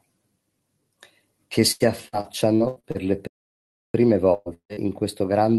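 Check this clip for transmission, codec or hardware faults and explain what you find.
Five network and playback faults affect the speech in this clip, all from 1.7 s onward, carried over a call path whose coding limits the top end to about 12 kHz, which fits Opus at around 32 kbps.

Repeated packet loss (robotic sound), 1.71 to 2.98 s: seven separate gaps, the longest 85 ms, each patched by stretching the preceding sound. Concealment fills about 29 percent of this span, so the speech turns choppy, with pieces missing throughout.

Playback stall, 3.27 to 3.94 s: the audio stops mid-flow for 0.67 s and then resumes. This is likely the player running dry or its thread being blocked, leaving output silent until data or processing time became available again.

Burst of packet loss, 4.34 to 4.49 s: about 120 ms of consecutive audio failed to arrive in time. The receiver extended the last sound and faded it, producing a brief held buzz or hiss before speech resumes further on.

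Long network dropout, 4.54 to 4.72 s: roughly 160 ms of audio is lost, likely through a network interruption. The concealment fades out, leaving about 90 ms of silence before the signal returns with the intervening material gone.

Short concealed packet loss, 4.73 to 4.80 s: about 40 ms never reached the decoder. The gap was filled by continuing the prior sound and blending back in, heard as a quick smear or wobble just after the dropout.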